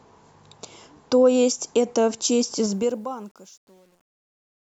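From 2.71 s the speech fade-out turns gritty, at its worst from 3.14 s to the end: truncation distortion on a fade, with the level stepping coarsely, which fits an undithered 9-bit stage.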